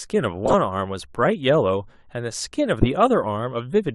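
A decoder played compressed frames with flipped bits as corrupt frame decoded, misreading gains and codes so energy landed at wrong frequencies. From 0.45 to 0.54 s a run of several damaged frames gives a loud error at wrong frequencies; at 2.82 to 2.88 s one damaged frame gives an error peaking near full scale.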